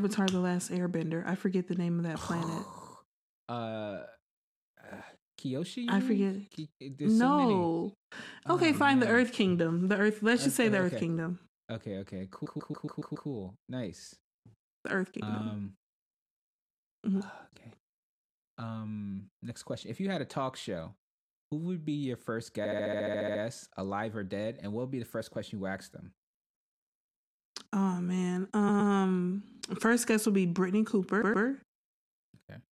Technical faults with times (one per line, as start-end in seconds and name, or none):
12.45-13.28 repeated frames
22.64-23.41 repeated frames
28.68-28.91 repeated frames
31.21-31.44 repeated frames